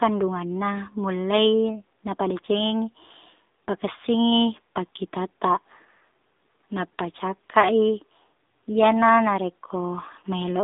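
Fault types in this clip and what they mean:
AMR narrowband mobile codec, throughout: the speech is band-limited to roughly 250 Hz to 3.7 kHz, with nothing above, and the vocal-tract model rebuilds each short frame from a few pulses, leaving a plainly audible buzzy, synthetic edge that fits a low mobile rate near 7.4 kbps.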